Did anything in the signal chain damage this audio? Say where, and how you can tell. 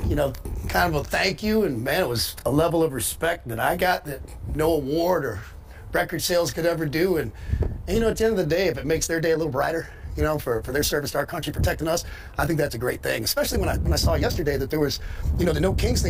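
Yes. A time-stretched section runs from 9.02 s to the end: the pace jumps to about 1.36 times faster while pitch stays put, sounding rushed. Likely software time-compression in an editing or playback stage, dropping short fragments to shorten the audio.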